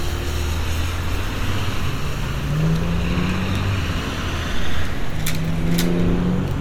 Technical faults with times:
none

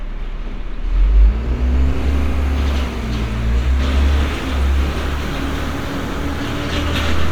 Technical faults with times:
none

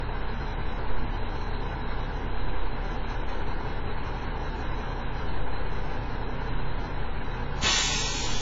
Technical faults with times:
0.00-8.41 low-bitrate audio saved at a high bitrate

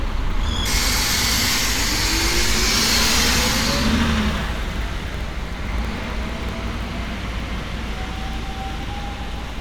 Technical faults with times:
4.31-6.93 periodic USB or driver dropouts

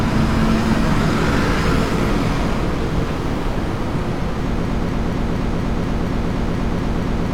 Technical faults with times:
4.65-7.34 broken-record loop

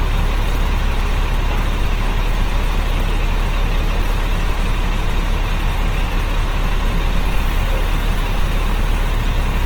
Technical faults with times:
0.00-9.65 Opus compression

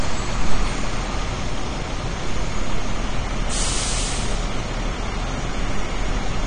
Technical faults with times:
0.00-6.47 AAC compression

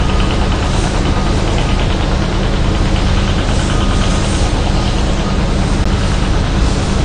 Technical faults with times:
0.00-7.05 AAC compression
5.84 CD skip

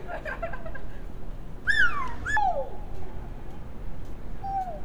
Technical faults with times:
1.65-2.37 audio read two samples at a time (double speed)

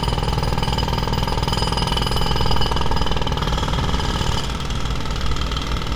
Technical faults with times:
none

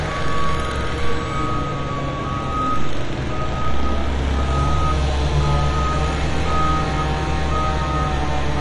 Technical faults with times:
0.00-8.61 MP2 compression

